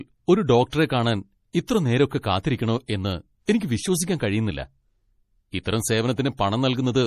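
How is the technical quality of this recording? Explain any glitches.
The speech carries plainly audible codec damage throughout, with four short pre-echoes on top.

The treble stops abruptly at 15 kHz, and the sound is watery and swirly with smeared attacks. This is likely MP3 compression at a low rate, around 40 kbps, where weak frequency lines drop in and out. A spectrogram shows a hard flat ceiling with flickering gaps beneath it.

Pre-echo occurs at 0.70–0.73 s, at 1.66–1.69 s just before "നേരൊക്കെ കാത്തിരിക്കണോ എന്ന്", at 3.46–3.48 s just after it, and at 3.59 s before "വിശ്വസിക്കാൻ കഴിയുന്നില്ല". In each case, quantisation noise spread across a transform block leaks 19–30 ms ahead of a sharp attack. It is heard as a short hiss that softens the onset, and it shows as a smudge of broadband energy on the spectrogram just before each attack.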